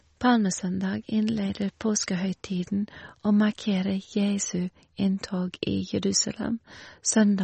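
Across the whole speech clip, the sound has a watery, swirly quality, with s sounds turning metallic and attacks smeared. This is likely MP3 compression at a bitrate around 32 kbps: a spectrogram shows a flat ceiling near 8.3 kHz and flickering, patchy gaps below it.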